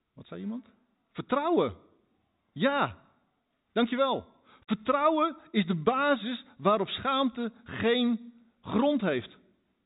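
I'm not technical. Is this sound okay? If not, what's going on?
Yes, no faults here.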